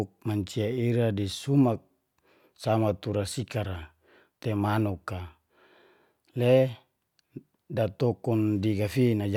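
No technical faults are audible.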